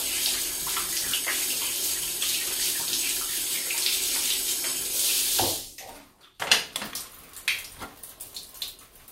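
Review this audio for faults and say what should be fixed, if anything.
No faults can be heard anywhere in these everyday sounds. Nothing here needs to be fixed.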